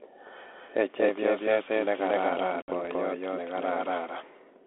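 A doubled audio track runs through the whole clip: a second full-band copy of the speech, about as loud as the first, trails it by roughly a fifth of a second. It is likely a second capture path or a misaligned edit, and it gives every syllable a dry, echo-free repeat.

Packet loss on an ADPCM call follows "chepyoset negararan", from 2.62 to 2.72 s. About 60 ms of audio drops out as a hard-edged silence, which suggests a few lost packets. The decoder's predictor and step size then lose track of the sender's, so the speech returns slightly distorted before settling. The underlying narrowband line, roughly 200 Hz to 3.5 kHz, has light coding grain that fits 32 kbit/s G.726 ADPCM.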